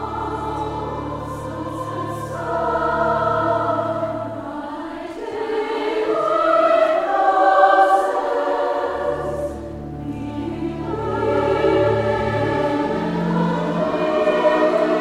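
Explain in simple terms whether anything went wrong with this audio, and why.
Nothing went wrong that can be heard here; listening through the whole clip, nothing stood out as a problem.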